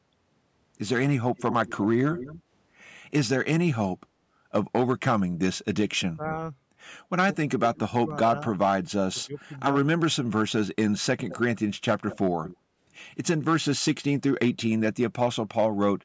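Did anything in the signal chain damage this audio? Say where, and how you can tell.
Yes. Hard clipping runs through the whole clip. About 7 dB of overdrive at a converter or sample-format stage flattens the loudest peaks, a couple of percent of samples. The squared-off tops add high harmonics, heard as crackle on the peaks.

Echo leak appears at 1.37–2.42 s, 11.29–11.60 s and 12.10–12.57 s. A faint, delayed copy of the speech trails the original by about 217 ms, then 213 ms, sitting roughly 10 to 15 dB down. This likely comes from a far-end echo canceller letting loudspeaker pickup through in call processing.

Speech suppressed in double talk appears at 6.13–6.27 s, 7.48–8.31 s and 9.13–9.38 s. The speech dips sharply, by roughly 20 dB and by nearly 30 dB in the longest stretch. This is likely the call's echo canceller clamping down while both sides spoke at once.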